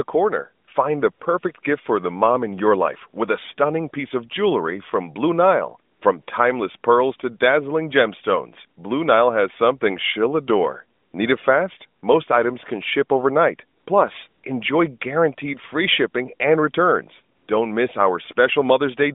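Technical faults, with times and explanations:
0.66 to 17.48 s, AMR comfort noise: nine brief gaps, 20 to 160 ms long, where the phone judged the talker silent, stopped sending speech frames and the receiver filled in synthetic noise built from a rough level and spectral estimate. The real background drops out and a flat, steady hiss switches in. On a spectrogram these show as smooth, texture-free patches inside the narrow mobile band, which fits light AMR-NB coding; on the waveform, even low-level noise replaces detail.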